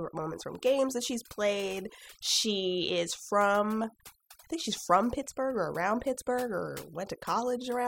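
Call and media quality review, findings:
Overdone noise removal across the full speech clip. Background pulled down, leaving twinkling specks where isolated bands flicker on and off. Probable component: noise suppressor set too aggressive. Mechanism: bands judged close to the noise estimate are cut hard or muted outright, and low-level speech detail in those bands is removed with the noise.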